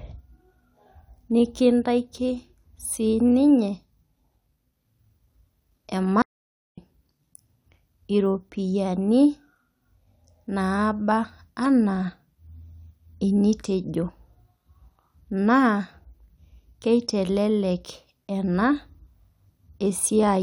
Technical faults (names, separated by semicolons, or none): audio dropout to silence